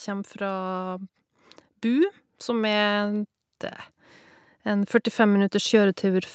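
From 0.05 to 3.3 s the automatic gain rising kicks in: the AGC decided the input was too quiet and pushed its gain up by about 5 dB, so voice and room swell together. It does it again from 4.64 s to the end, with the call-band audio topping out at 8 kHz.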